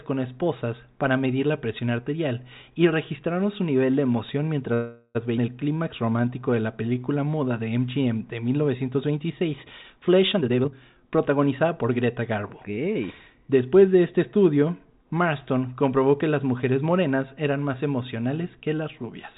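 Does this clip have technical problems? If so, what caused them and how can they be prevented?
Yes. Four network-timing faults occur in this speech, heard over a narrowband call path with nothing above 4 kHz, which fits G.711 A-law.

Call audio freeze, 4.74 to 5.17 s: packets were likely held up and the jitter buffer ran dry. The last sound is stretched into a fading fill for 0.41 s, then speech resumes with nothing lost. Prevention: give the jitter buffer more headroom, and prioritise call traffic on congested links.

Skip ahead, 5.37 to 5.39 s: a chunk of audio was dropped while later packets were already queued. Playback jumps forward almost seamlessly, losing about a fifth of a second. Prevention: reduce packet loss, and let the jitter buffer drain gradually instead of discarding audio when it overflows.

Jitter buffer slow-down, 5.66 to 7.49 s: the buffer ran low, so the receiver repeated pitch periods to rebuild its reserve. 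Speech plays at 90% speed with unchanged pitch, adding 191 ms of drawn-out sound. Prevention: stabilise network delay so the buffer's target rarely needs to rise.

Jitter buffer speed-up, 10.36 to 12.31 s: delayed packets arrived in a burst and overfilled the buffer. The receiver trimmed short pitch-period slices, so speech runs at 120% speed at the same pitch, with around 0.4 s removed. Prevention: reduce bursty delivery by fixing queuing or congestion along the route.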